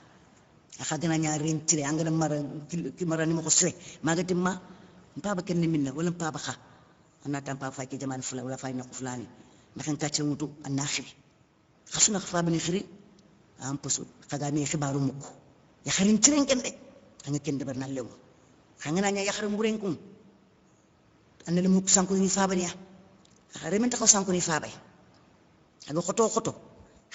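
Speech carrying Speex codec damage from start to finish: a hoarse, noisy CELP texture consistent with a mid-range setting around 16.8 kbps, while a spectrogram shows smeared harmonics and only diffuse noise-like fill above 4 kHz.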